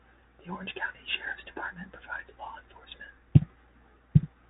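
Throughout the speech, the Bluetooth CVSD headset codec is plainly audible. Each sample is coded as one up-or-down bit, which fits a 64 kbps link, and the step size lags fast changes. Nothing passes above 3.8 kHz. Sibilants turn scratchy over a granular hiss.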